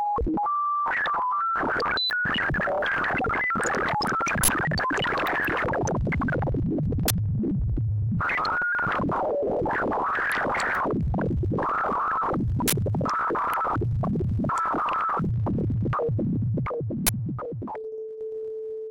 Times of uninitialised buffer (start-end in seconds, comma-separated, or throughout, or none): 4.43-4.48, 7.08-7.11, 12.68-12.72, 17.07-17.09